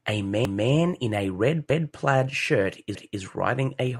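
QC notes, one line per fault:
0.45–0.70 s and 1.70–1.95 s, overlapping chunks: a 250 ms stretch replays at each join, just before "in a red plaid" and between "in a red" and "plaid shirt", which fits 1 s chunks starting before the previous ended. The waveform shows a duplicated segment with a discontinuity at each seam, and the spectrogram shows a thin vertical click line followed by a repeated spectral pattern, heard as a stutter.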